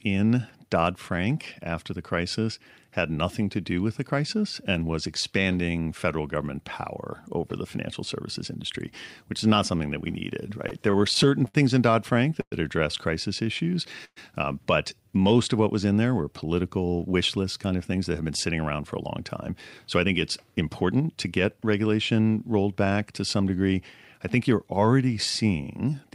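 Speech that drags and hitches between 10.47 and 12.54 s, with twelve brief catches lasting up to 109 ms and about 14% of that stretch filled in, is showing repeated stalls (stutter): packets kept arriving late, so the jitter buffer ran dry and the last sound was stretched to cover each wait. Just after "addressed crisis", from 13.44 to 13.77 s, the sound turns drawn-out at unchanged pitch, running at 91% speed with 38 ms added, and it does so again from 14.95 to 15.35 s at 88% with 57 ms added. This is jitter buffer slow-down, where repeated pitch periods rebuild a depleted reserve. At 14.05 to 14.18 s, right before "uh but", a fading 117 ms fill ending in about 50 ms of silence marks a call audio freeze, likely from packets held up in transit while the buffer emptied, after which the audio resumes where it stopped. After "in there were political", from 17.13 to 19.19 s, the sound turns hurried at the same pitch, running at 108% with about a fifth of a second removed, and again from 19.95 to 21.65 s at 107% with roughly a tenth of a second trimmed. 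That is jitter buffer speed-up, cutting pitch periods to shed excess delay.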